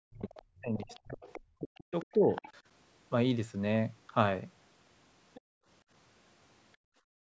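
From the start to 2.32 s, the speech is pushed down in bursts. This is speech suppressed in double talk. Both ends were likely talking at once, so the echo canceller ducked everything. The worst dips go around 40 dB down. About a second and a half is affected.

Over the same opening, the other side's voice leaks through, at 0.27 to 0.42 s, 0.84 to 1.4 s and 1.75 to 2.51 s. It grows from roughly 25 dB to roughly 15 dB below the speech. It returns briefly at 5.34 to 5.41 s. The likely cause is loudspeaker echo the canceller failed to remove. It sounds like a faint second talker underneath.

Right after, from 5.41 to 5.67 s, the room sound drops out by about 35 dB. It happens again from 6.76 s to the end. This is background gated by the echo canceller. It clamped the microphone while the loudspeaker played, so the background vanishes abruptly, then returns.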